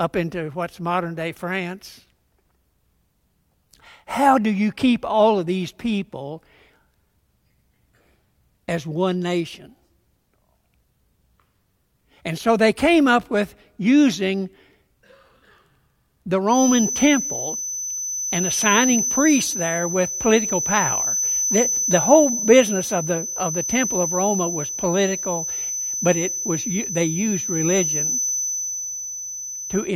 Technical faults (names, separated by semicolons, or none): feedback whistle